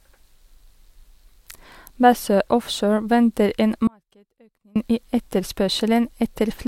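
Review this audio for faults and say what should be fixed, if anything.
A likely break in the signal feed upstream, with the path after it left live, causes an audio dropout to a faint residue from 3.87 s to 4.76 s, right after "venter en". For about 0.88 s the speech cuts out abruptly and only a faint leak of the sound remains, roughly 35 dB below its normal level, before returning just as sharply. To prevent it, secure and monitor the source connection so any interruption in the feed is caught during capture.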